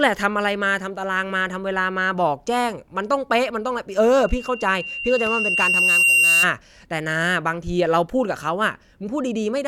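From 4.21 s to 6.49 s a single piercing tone at 2.8 kHz rises out of the speech, swelling over about two seconds until it sits a few decibels above the talker before cutting off. This is loudspeaker feedback squeal: the microphone was picking up a loudspeaker it was feeding, and at 2.8 kHz the loop gain exceeded one, so that frequency kept reinforcing itself.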